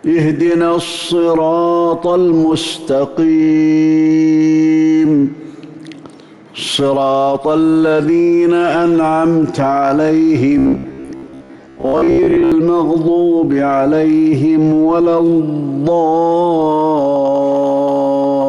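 From 10.58 to 12.52 s, the audio takes on a robotic sound from repeated short buffers. It becomes a rigid, metallic buzz at about 66.7 Hz. That pitch fits a segment of roughly 15 ms looping. Most of the sound there is likely repeated fragments, with the real audio skipped.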